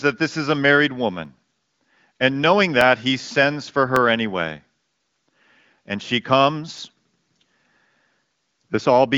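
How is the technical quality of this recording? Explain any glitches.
The recording has five sharp clicks, with the sound carried through the AMR-WB wideband codec at 18.25 kbit/s and nothing above about 7 kHz. The clicks come at 1.25 s just after "this is a married", at 2.81 s just before "he sends for", at 3.96 s just after "he sends for", at 4.94 s and at 6.78 s. They are likely dropped samples: a fraction of a millisecond vanishes, the waveform jumps abruptly, and each gap sounds as one brief click.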